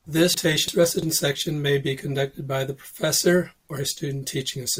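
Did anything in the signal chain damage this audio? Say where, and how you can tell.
Yes, there is a chunks out of order fault in the driver or buffer stage, between 0.34 and 1.02 s, just before "sections may be conducted". A block of about 341 ms was delivered one chunk late and plays after the block that should follow it. You hear a jumbled moment with hard joins at 0.34, 0.68 and 1.02 s. On a spectrogram, those joins show as thin vertical broadband lines where the speech contours break. On the waveform, they appear as abrupt steps.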